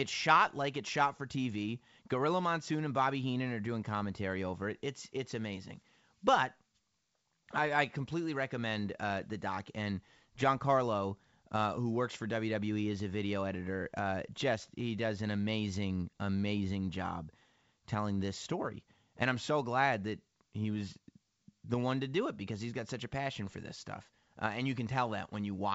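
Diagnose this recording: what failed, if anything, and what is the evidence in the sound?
Nothing failed in this recording.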